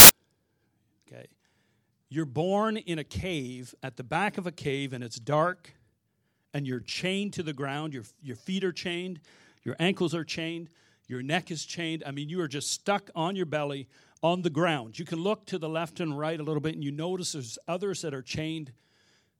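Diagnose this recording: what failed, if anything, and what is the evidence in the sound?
A storage and file-parsing fault: file tags played as audio. From 0.00 to 0.09 s the speech is preceded by a hard-edged burst of very loud white noise. That points to an embedded cover picture, whose compressed bytes lack structure and were decoded as samples.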